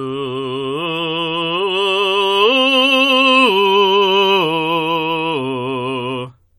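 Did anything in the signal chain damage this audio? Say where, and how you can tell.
No, nothing in the chain has left an audible mark on this music, with no stage from capture through playback showing any fault.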